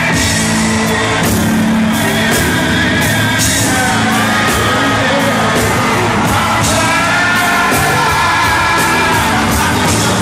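Nothing in this audio stands out as a technical problem; it's all just sound, with nothing catching the ear along the way.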